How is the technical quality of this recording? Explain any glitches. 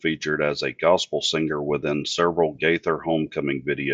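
The recording has audible coding damage throughout. Across the whole speech clip the sound is dull and gurgling, most likely from MP2 compression at a low rate around 80 kbps, switching off upper sub-bands and coarsely quantising the rest.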